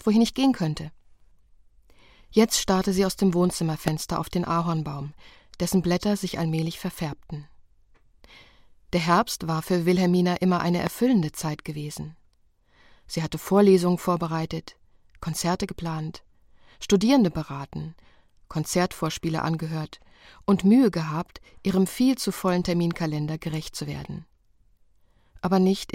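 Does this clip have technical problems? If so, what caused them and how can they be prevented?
Yes. There are two loud pops, from 3.88 to 3.90 s and from 10.87 to 10.89 s. Each is a single sharp crack that jumps roughly 15 dB above the surrounding sound and is gone in about 20 ms, with the audio continuing underneath. The likely cause is a sudden voltage step or spike, from a connector being plugged, a switch, static discharge or a driver glitch, entering the signal path and being shaped into a brief pulse. To prevent it, keep cables and switches untouched while recording, use grounded, secure connections, and keep audio drivers stable.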